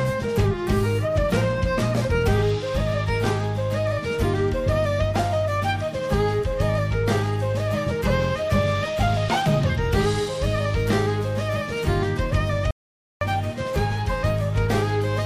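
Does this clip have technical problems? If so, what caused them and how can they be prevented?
Yes. There is an audio dropout to silence from 12.71 to 13.21 s. The sound cuts off mid-flow and 0.50 s of silence follows, with no room tone, before the audio resumes. The input was likely lost briefly, through a loose connection, a failed link or an accidental mute, while the recorder kept writing silence. Securing cables and connections and monitoring the input during capture would prevent it.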